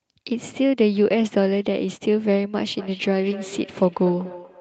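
From 2.74 s to the end, a second device on the same call replays this microphone's signal into the room, and the local echo canceller cannot remove playback it did not produce. The result is feedback echo between two devices: the speech returns roughly every fifth of a second, peaking at about 17 dB below the direct sound, each repeat thinner and more ringing, all over a call codec band that tops out near 8 kHz, which fits Opus at a modest bitrate.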